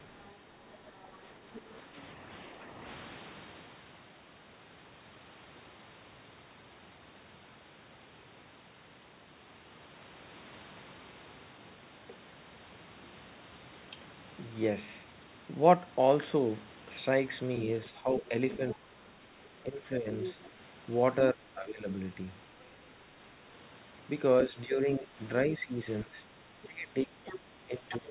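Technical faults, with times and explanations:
0.0–1.74 s, 18.18–19.08 s, 20.25–20.49 s and 26.86–27.93 s: other side's voice leaking through. A second voice sits behind the main talker. It is faint at the opening, about 25 dB down, then about 15 dB down in the later stretches, and a brief burst at 20.25 s comes within about 10 dB. This is likely loudspeaker playback of the far end reaching the microphone, with the echo canceller leaving part of it in place.
1.38–2.83 s, 17.86–20.09 s, 21.34–21.86 s and 24.47 s to the end: speech suppressed in double talk. The main voice sags in patches. The dip is slight, about 5 dB, near the start, about 10 dB around 18–20 s, and a deep cut of about 15 dB at 21.34 s and through the final seconds. Most of these dips overlap the leaked far-end voice, so the likely cause is the echo canceller ducking everything while both sides talked at once.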